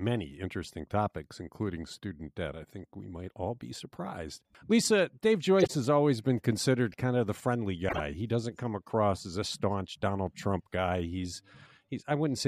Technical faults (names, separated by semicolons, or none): corrupt frame decoded